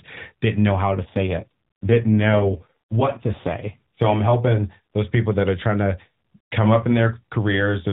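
From about 0.97 s to 4.0 s there's an AMR rate drop: the link weakens, so the codec steps down from 12.2 kbps to 5.9 kbps and hands the freed bits to error protection. You don't get a gap or any change in bandwidth, but the speech turns rougher and more synthetic, with a buzzier edge, until the rate climbs back. Around it the call sits at the normal AMR-NB 12.2 kbps, lightly coloured and capped below 4 kHz.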